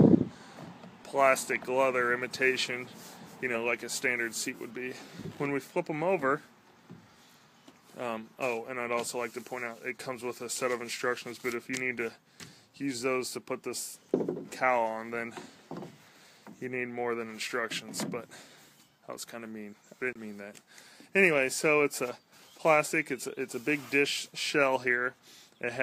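A corrupt frame decoded shows up from 20.13 to 20.17 s. It is a short, quiet glitch, peaking at about -40 dBFS. Flipped bits in roughly two compressed frames made the decoder misread gains and codes, placing energy at wrong frequencies for those 40 ms.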